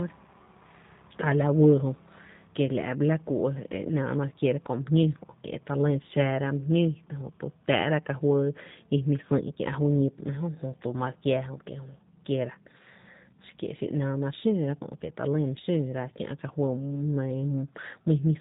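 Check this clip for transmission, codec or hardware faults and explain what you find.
There's one fault: G.729 codec damage, plainly audible for the whole clip. The speech is rebuilt from a vocal tract filter and sparse pulses, so it sounds rough and synthetic with nothing above 4 kHz, which fits an 8 kbit/s link.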